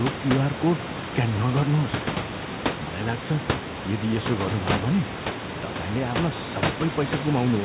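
Nothing stood out on listening to this speech; the room's background noise sits about 8 dB below the speech, and the call path carries the sound only up to 4 kHz, as expected for this kind of line.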